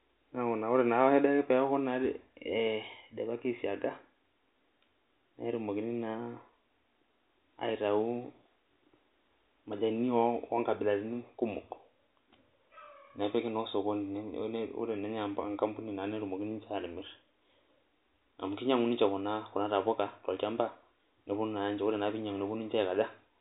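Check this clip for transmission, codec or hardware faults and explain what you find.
No transmission, codec or hardware faults show up in this clip.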